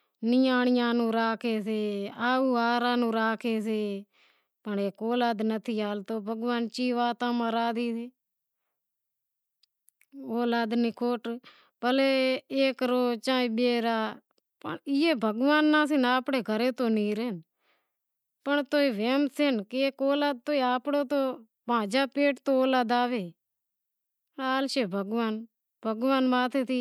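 No faults turn up anywhere in the recording; the speech runs without a single dropout, glitch or discontinuity.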